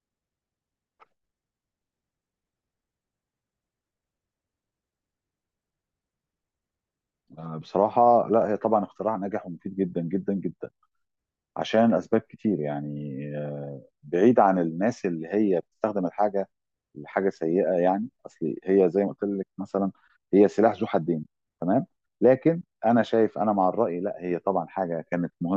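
Listening to the speech recording, nothing stood out as a technical problem at any point.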